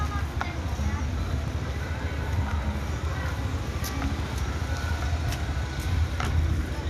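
No technical faults can be heard anywhere in this recording of sounds. There is nothing to report at any point in it.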